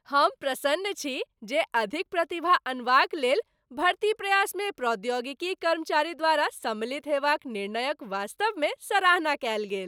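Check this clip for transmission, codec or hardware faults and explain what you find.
No faults turn up anywhere in the clip.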